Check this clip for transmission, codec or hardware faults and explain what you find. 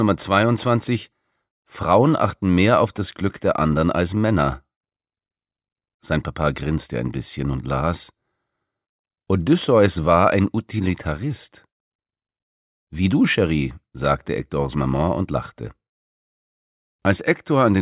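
Nothing wrong can be heard anywhere in this clip.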